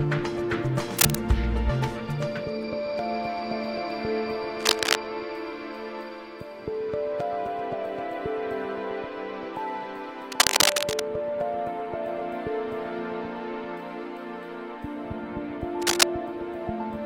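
Bursts of cable scratch noise at 0.97–1.15 s, 4.59–4.97 s, 10.32–11.02 s and 15.82–16.06 s, likely from a worn contact shifting, give dense, ragged rustling rather than isolated clicks, loudest in the first burst.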